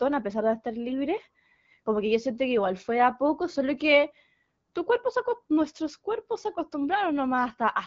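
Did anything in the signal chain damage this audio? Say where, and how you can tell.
Yes. After "a pesar de estar", 0.88 to 0.98 s turns hoarse and gargly. These are AMR bit errors on the radio link: flipped low-priority bits scrambled a few codec frames.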